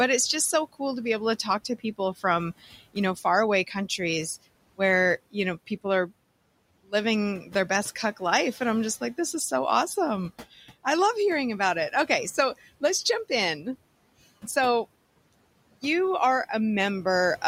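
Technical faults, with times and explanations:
7.44 to 7.54 s, speech cut by the noise suppressor: for about a tenth of a second the suppressor misjudged part of the speech as background and pulled it down along with the room noise, by about 7 dB at its deepest. The sound in that span turns briefly faint and swallowed, as if the tail of a syllable had been muffled. The room noise sits about 22 dB under the speech, and the suppressor's gain reduction briefly caught the speech along with it.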